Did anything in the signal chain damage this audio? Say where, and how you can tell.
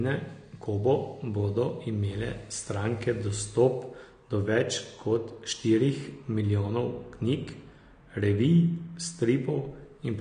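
Yes, at the codec stage, throughout: nothing above 9.6 kHz, plus warbling, smeared sibilants a plain low-pass wouldn't cause, likely AAC compression near 32 kbps.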